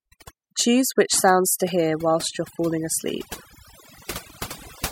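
From start to end, the speech carries overdone noise removal. Noise reduction set far too hard pulls individual frequency bands down whenever they sit near the estimated noise floor. Quiet parts of the voice vanish with them. Gaps fall to near silence with twinkling specks.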